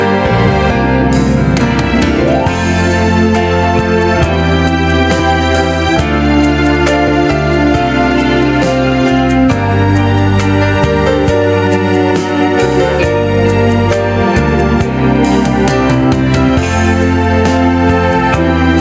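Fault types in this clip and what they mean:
Gain pumping: The level breathes up and down through the whole clip. The swing is around 5 dB. Loud and soft parts end up close in level, so the sound feels squashed. The likely cause is input gain set far too high, with a fast limiter or compressor clamping each peak. The call microphone processing also shows, with nothing above 8 kHz.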